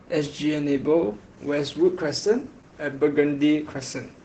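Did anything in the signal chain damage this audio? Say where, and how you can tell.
Yes. Opus voice compression at the codec stage runs throughout the speech. Nothing is heard above about 8 kHz, and the voice sounds hoarse and slightly robotic, which fits SILK's linear-prediction coding at roughly 12 kbps. The excitation is coded coarsely, and the damage is plainly audible.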